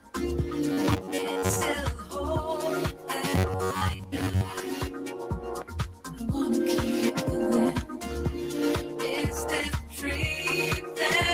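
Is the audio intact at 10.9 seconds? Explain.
No. A noise suppressor built for speech is running on this material, treating steady tones, ambience and decay as noise. Its gain keeps shifting by around 5 dB, so held sound pumps and thins while sharper onsets pass through.

From 10.81 to 10.97 s the noise suppressor cut this sound, mistaking it for noise and pulling it down by as much as about 5 dB. For roughly 150 ms the sustained part sinks and its tail is clipped short.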